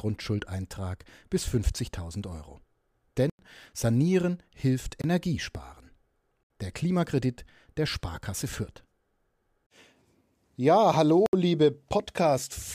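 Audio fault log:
3.30 to 11.33 s, block of digital silence: the speech drops out, giving short holes at 3.30 to 3.39 s (about 93 ms), 5.02 to 5.04 s (about 23 ms), 6.43 to 6.50 s and 11.26 to 11.33 s (about 70 ms each). Whole blocks of samples went to zero with no fade, likely because the output buffer was not filled in time. The first two lengths fit 4096- and 1024-sample buffers.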